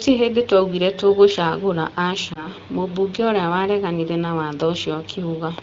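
At about 2.33 s there's a short glitch from lost AMR speech frames, lasting until around 2.47 s. It sounds like a single 20 ms frame went missing. The wideband (HD Voice) decoder papered over the gap by reusing the last good pitch and vocal tract settings at a lower gain, so you hear a quick dip or warble. The speech then picks up again weak or rough for a moment, with the light AMR-WB texture you'd expect from a mid rate around 12.65 kbit/s.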